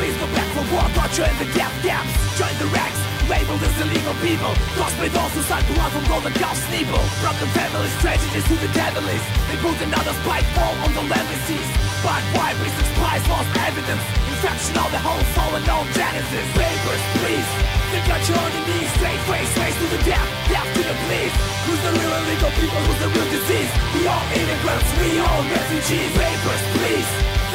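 A steady, raspy buzz sits roughly 15 dB below the sound throughout. This is mains buzz, with switching spikes at twice the 60 Hz mains rate leaking in.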